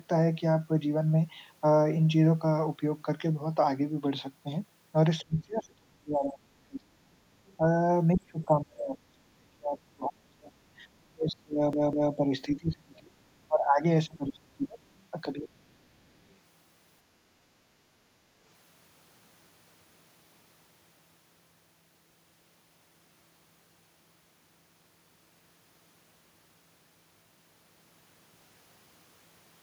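From 5.21 to 7.2 s the talker's speech sinks sharply, by something like 35 dB at its deepest, and it does the same from 8.15 to 10.81 s and from 11.09 to 13.30 s. This is speech suppressed in double talk, likely an echo canceller that could not separate the near talker from loudspeaker echo while both sides spoke, so it attenuated everything. Shorter and shallower dips of roughly 20 to 30 dB follow at 13.48 to 13.84 s, 14.07 to 14.80 s and 15.32 to 15.82 s. In these the speech fades and thins in pieces.

Between 7.46 and 7.57 s a faint scrap of a second voice surfaces, about 35 dB below the main speech. Another, even quieter at about 40 dB down, appears from 16.29 to 16.35 s. This is the other side's voice leaking through, likely residual far-end echo that the canceller failed to remove from the microphone signal. Both fragments are brief.

From 11.73 to 12.13 s, inside one of the suppressed stretches, the audio stutters. 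It behaves like a CD stuck on one turn. A 0.2 s segment plays twice in a row with a short mute at each jump back. The result is a quick, evenly spaced repetition, the mechanical hiccup of a disc whose laser keeps skipping back to the same spot.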